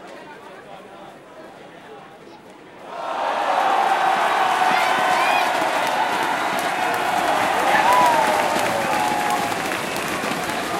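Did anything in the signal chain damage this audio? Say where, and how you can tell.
No, I can't hear anything in the chain that has damaged these everyday sounds, so there's no stage to point to here.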